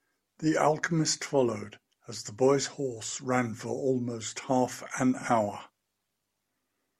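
No technical faults can be heard anywhere here.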